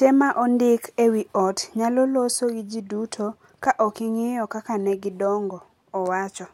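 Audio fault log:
No faults are audible in this speech recording.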